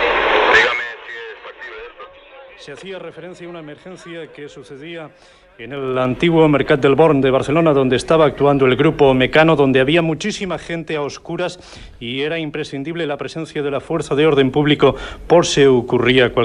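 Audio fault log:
0.56–0.93 s, 5.57–6.13 s, 9.85–10.40 s, 13.47–14.49 s: zipper noise. Gain moves in unsmoothed 2 dB jumps, about 20 dB down, 20 up, 10 down, then 10 up, so each jump clicks. The ticking slows from around 30 to around 5 per second.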